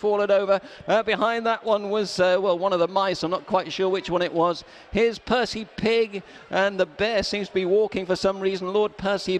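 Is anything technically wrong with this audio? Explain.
No, nothing technically wrong can be heard in this audio. There is no fault to point to at any moment in it.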